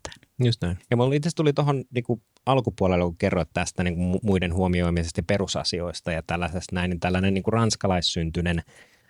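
No technical faults are audible anywhere in the recording.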